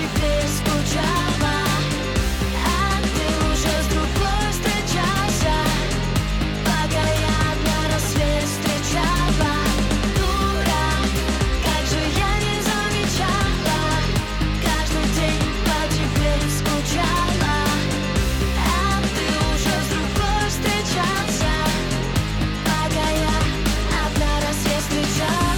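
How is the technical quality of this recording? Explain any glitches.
No glitches or technical faults can be heard anywhere in the recording, and the signal stays stable and intact throughout.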